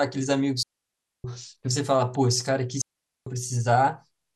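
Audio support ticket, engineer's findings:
Digital wireless dropout, 0.63–1.24 s and 2.81–3.27 s: receiver muting on lost link data. Clean near-silent gaps, no noise bursts. Waveform flatlines; spectrogram shows blank vertical bands with sharp edges.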